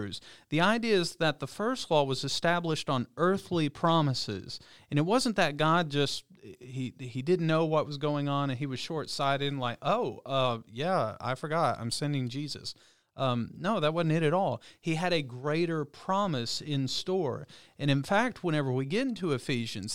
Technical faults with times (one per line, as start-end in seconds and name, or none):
16.25 DC step